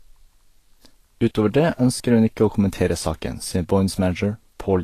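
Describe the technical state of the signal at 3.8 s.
At 3.8 s the speech sounds hissy and grainy, with dulled, smeared consonants, likely Vorbis compression near 37 kbps. It runs throughout, and the noise-filled treble, not metallic warbling, sets it apart.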